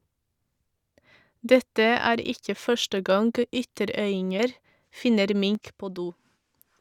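A sudden gain jump at 5.55 s drops the speech and its background noise together by about 6 dB, and the lower level holds to the end. The likely cause is a digital gain change applied between two samples with no ramp, such as a one-bit shift.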